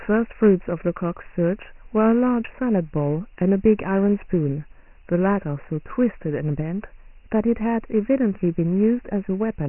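Dialogic VOX ADPCM runs throughout: coarse 4-bit adaptive coding, consistent with 6,000 samples a second, cuts everything above 3 kHz and leaves gritty hiss trailing the speech.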